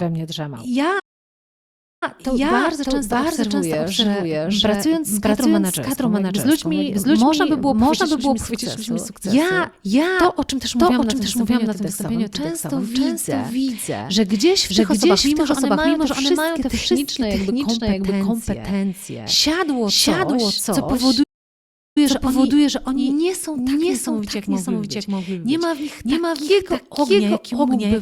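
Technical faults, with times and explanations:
Throughout: doubled audio track. A second copy of the speech is mixed in, most likely because the signal reaches the mix twice, once through a slower path that lags behind the direct one. The late copy trails by roughly 0.7 s at about the same level as the original. It carries no reverberant tail or room colouring, so it sounds like a clean, full-band second pass of each phrase rather than an echo.
0.99 to 2.03 s and 21.23 to 21.98 s: playback stall. The player likely ran short of buffered data or had its output thread held up, so it produced nothing until it caught up. The speech cuts off abruptly into silence for 1.02 s in the first case, resuming with "to bardzo często obserwuję", and for 0.73 s in the second, after "kompetencje siadło coś co" and before "że oni nie są".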